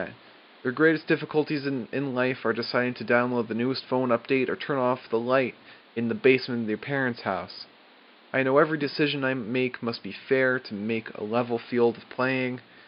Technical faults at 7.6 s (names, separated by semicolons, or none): none